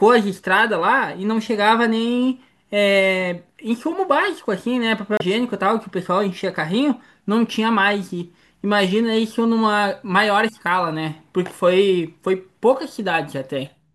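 At 5.17 to 5.21 s the speech is broken by damaged data in the compressed stream. Corrupted bytes leave the decoder misreading frames and losing sync until it finds the next valid frame header, producing a brief glitch about 40 ms long.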